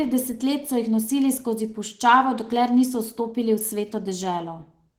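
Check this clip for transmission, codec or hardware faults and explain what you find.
One codec fault runs through the whole clip: Opus voice compression. At a rate that points to roughly 16 kbps in hybrid mode, the linear-prediction layer codes the speech excitation coarsely while a thin upper layer keeps the band open to about 20.2 kHz, leaving the speech audibly hoarse and faintly robotic.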